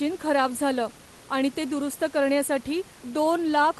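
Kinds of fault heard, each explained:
Nothing in this speech clip stands out as a fault; the faint room noise sits about 23 dB under the talking, and the call codec's band limit around 12 kHz is just how the line normally sounds.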